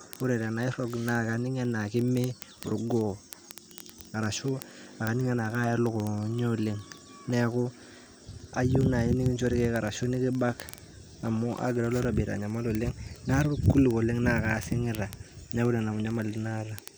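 From 0.11 s to the end at 16.97 s, the speech carries a rapid train of sharp ticks, roughly fifty a second, uneven in strength. These are word clock ticks: the receiving device runs unlocked from the sender's clock, drifting around 1000 ppm, so a single sample is repeatedly dropped or repeated.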